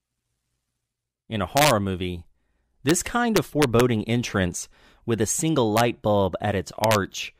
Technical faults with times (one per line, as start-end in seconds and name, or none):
1.57-1.71 integer overflow
2.89 integer overflow
3.36-3.80 integer overflow
5.77-5.80 integer overflow
6.84-6.95 integer overflow